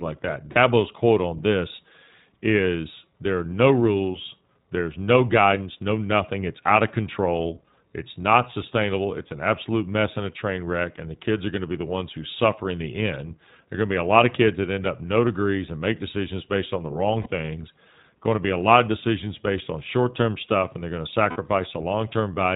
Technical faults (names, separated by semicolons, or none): iLBC codec; lost iLBC frames